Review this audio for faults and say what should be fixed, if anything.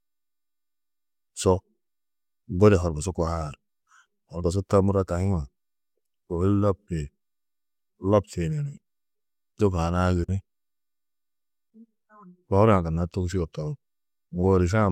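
Nothing needs to be fixed, as the audio has no faults.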